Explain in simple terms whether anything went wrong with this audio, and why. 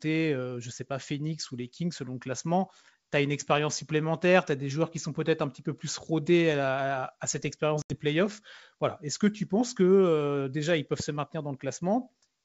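Packet loss on an ADPCM call at 7.82 s, after "cette expérience": an 80 ms silent gap, roughly four packets, then the decoder falls back into step by 7.95 s.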